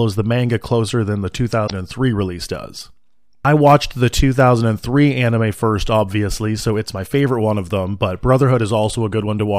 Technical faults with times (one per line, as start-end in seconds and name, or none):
1.63-1.72 damaged data in a compressed stream